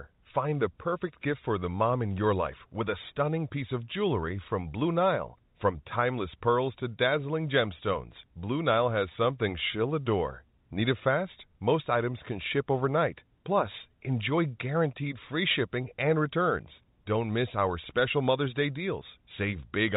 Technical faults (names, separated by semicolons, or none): none